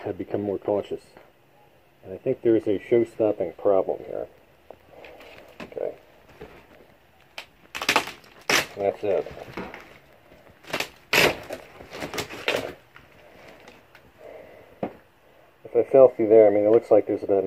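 Listening through the recording, nothing stood out as a technical problem at any point.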